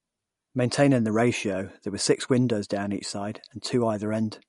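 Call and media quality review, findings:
Likely MP3 compression at a starved bitrate, throughout the speech. Encoder short of bits: treble cut hard, nothing above 11.2 kHz, consistent with roughly 48 kbps. Weak frequency lines zeroed and restored frame to frame, giving a watery, swirling texture and metallic chirp on s sounds. Onsets smeared. Codec damage clearly audible across the whole clip.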